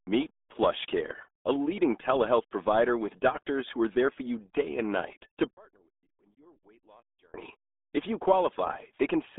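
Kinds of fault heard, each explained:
RealAudio 14.4 codec: This is the old 8 kbit/s dial-up speech codec. Here the speech sits in a narrow 250 Hz to 3.5 kHz band, with nothing above 3.8 kHz. Heavy coding damage makes every syllable muffled and gargly.
One channel inverted: From 5.53 to 7.34 s, just after "day and night to", the speech nearly vanishes. The level falls by about 32 dB, leaving only a faint residue. One stereo channel likely had its polarity flipped, so the shared centre cancelled when summed to mono.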